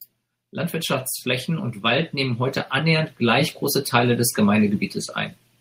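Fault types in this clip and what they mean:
Automatic gain rising: the automatic gain control judged the incoming level too low and began lifting its gain, ramping it up slowly rather than in a single step. From 0.38 s to 4.8 s the level climbs by about 12 dB, so the speech grows steadily louder across those four-plus seconds. Because the gain applies to the whole signal, the background noise floor rises along with the speech instead of staying put.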